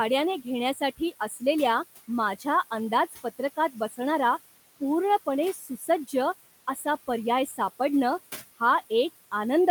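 A speech recording with room noise sitting about 18 dB below the voice, processed by a noise suppressor that pulls the steady background down by about 14 dB frame by frame, so the residual noise dips between phrases and swells under them. Speech cut by the noise suppressor occurs at 0.44–1.42 s, 3.74–3.99 s, 5.26–6.13 s, 6.75–6.85 s and 7.46–7.59 s. In each stretch, brief portions of soft speech were treated as noise and dropped by about 9 to 11 dB, so quiet sounds come across swallowed or faint.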